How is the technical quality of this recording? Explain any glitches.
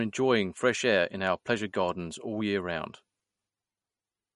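Quality's held back by one fault running the whole way through. It's likely MP3 compression at a low bitrate, around 50 kbps by the sound of it: nothing above 11.1 kHz, and weak frequency lines flickering frame to frame give the speech a watery, swirly edge.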